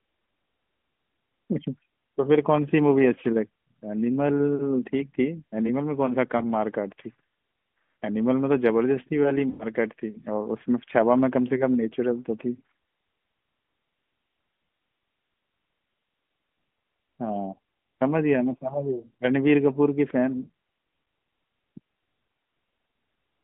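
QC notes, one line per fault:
6.38–6.43 s and 9.50–9.67 s, lost AMR speech frames: one 20 ms frame gives a brief warble; the 100 ms run drags the sound out and fades it before recovery. These are decoder concealment, not silent gaps or clicks.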